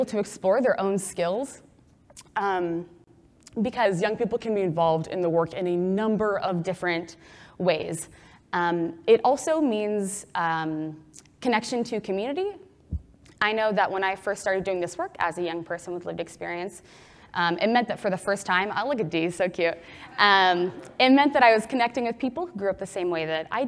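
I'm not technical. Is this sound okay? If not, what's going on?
No, not entirely. From 3.85 to 6.48 s there's a wrong sample rate fault: that stretch plays back too slowly, about 8% slower and roughly a semitone and a half lower, so everything drags and sags together. The pattern fits 24 kHz audio being played at 22 kHz.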